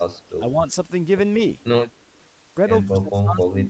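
At 0.55 to 0.65 s the level briefly sags by a small amount, around 5 dB, and at 2.89 s it falls much further, roughly 20 dB, staying down through to the end. The likely cause in both places is speech suppressed in double talk: with the far end active, the echo canceller could not tell local sound from loudspeaker echo and attenuated everything it picked up, thinning and muting the signal.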